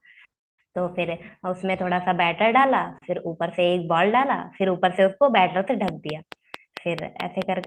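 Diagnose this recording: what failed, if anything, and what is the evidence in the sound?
A train of clicks runs from 5.88 s to 7.65 s, near the end of the speech. The pulses are alike in shape, evenly spaced at 4.56 per second, about ten in all, and they peak roughly 15 dB above the speech, so they tick clearly over it. The steady repetition points to an external source rather than the talker, likely interference coupling into the analogue wiring or a faulty connection or power supply injecting a periodic pulse into the path.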